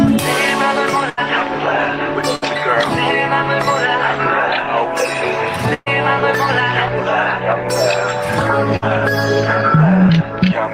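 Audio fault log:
1.09–1.19 s, 2.35–2.44 s, 5.74–5.88 s, 8.76–8.84 s: burst of packet loss. Packets were lost or arrived too late, so the receiver stretched and faded the last sound for 60 to 120 ms, then skipped ahead. The third fill decays into about 20 ms of silence.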